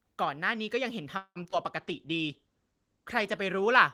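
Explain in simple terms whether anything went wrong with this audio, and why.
Several things go wrong in this speech, all after the first second.

From 1.17 to 1.38 s the sound stalls. The last sound is stretched into a fading buzz that ends in a brief silence, about 70 ms, and then the speech picks up exactly where it left off. That is a call audio freeze, likely caused by packets arriving late so the receiver had nothing to play. Unlike packet loss, nothing is missing here. The speech is simply pushed later by a gap of about 0.18 s.

Just after, at 1.44–1.47 s and again at 1.51–1.54 s, there are two tiny smears, each only a few hundredths of a second. This is short concealed packet loss. Small pieces of the speech never arrived, and the receiver papered over each hole by extending the sound around it. These are far shorter than the freeze and don't delay anything. Instead, a little of the real speech is lost and replaced by a guess.

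From 1.77 s to the end, the speech turns duller and rough. This is a call bitrate drop. The connection told the encoder to use much less data, so it coded the speech more coarsely and discarded the highest frequencies, lowering the top of the range from 20 kHz to 12 kHz. Unlike the brief glitches, this lasts for seconds, and it is worst for about 1.4 s.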